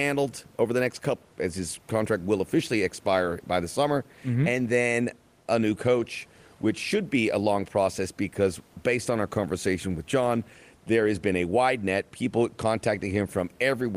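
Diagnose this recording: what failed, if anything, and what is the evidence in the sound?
Nothing in the signal chain has failed: the speech comes through intact, and the only thing beneath it is the room's own background noise, sitting about 34 dB below the voice as part of the original recording.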